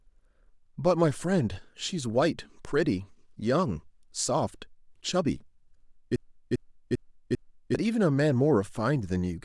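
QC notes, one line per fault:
6.16 to 7.75 s, broken-record loop: a 0.40 s slice of the speech repeats four times back to back and replaces what should have followed, likely a stalled player or stream resending its last fragment. The waveform and spectrogram show identical blocks tiled end to end.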